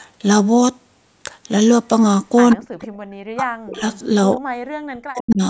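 Echo leak at 2.51 to 2.56 s, then again at 2.82 to 2.88 s and 3.94 to 3.99 s: brief scraps of a delayed copy of the speech, trailing the original by about 131 ms. The likely cause is a far-end loudspeaker whose echo canceller failed to remove everything its microphone captured, so a fragment returned down the line. The first scrap sits about 15 dB below the speech, the later ones fainter at about 25 and about 30 dB down.

Speech suppressed in double talk at 2.55 to 2.87 s, 3.31 to 3.85 s and 4.36 to 5.42 s: the speech collapses in level, falling by as much as roughly 40 dB, the last stretch lasting about a second. This likely happened because both ends spoke together and the echo canceller, unable to separate the local talker from its own loudspeaker echo, turned everything down. The audio has nothing above 8 kHz.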